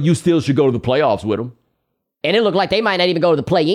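This speech clip has a section at the wrong speed from 2.21 s to the end at 3.74 s. There the audio runs 1.16 times too fast. Pitch rises by about three semitones at once, and the delivery sounds hurried. The likely cause is playback against a mismatched clock.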